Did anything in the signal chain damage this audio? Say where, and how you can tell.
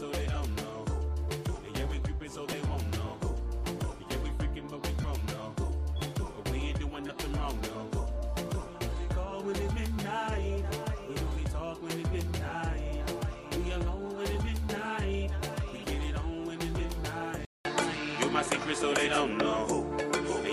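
Yes. At the Bluetooth link and codec stage, there are lost LE Audio frames at 2.52 s (one 7.5 ms frame) and at 5.02–5.04 s (about 22.5 ms). In both gaps the LC3 decoder conceals the loss by repeating the last spectrum with randomised signs, so tonal content briefly turns into a noisy smear.

From 17.45 s to the end, the capture path changes. After a 200 ms silence, the audio has nothing above 11.4 kHz, a level shift of a few decibels, and a new noise floor roughly 35 dB down. That sudden narrower, noisier character points to the input having likely switched to a poorer device.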